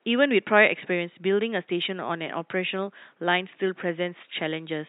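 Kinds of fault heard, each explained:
No technical faults are present in the speech signal, and the only background is the room's own ambience, sitting about 45 dB below the speech.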